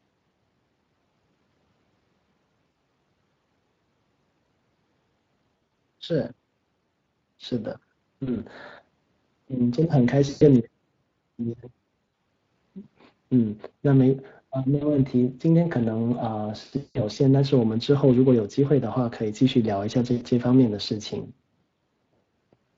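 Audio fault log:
throughout Speex codec: the speech has a plainly audible hoarse, grainy roughness, with a noisy edge on voiced sounds. Speex is a CELP codec that rebuilds speech from a filter driven by a coded excitation signal. At the rate this clip suggests, around 20 kbps, that excitation is coarse. The fine detail between the harmonics is replaced by noise-like approximation, which is what makes the voice sound rough.
2.72, 5.59–5.66, 8.23–8.32, 10.29–10.43, 12.05–12.25, 14.75–14.96, 16.77–17.0, 20.13–20.23 VoIP packet loss concealed by the speech codec: at each point the speech briefly smears into a buzzy, sustained tone or coloured noise that fades, then recovers weak and distorted. Lost audio runs from 40 ms up to 180 ms, the longest at 16.77–17.0. At 5.59 and 12.05, 120 ms of losses are scattered across 200 ms. The decoder fills each gap by repeating its last pitch and filter at falling gain, and since each frame builds on the last, the voice stays weak or distorted after packets resume.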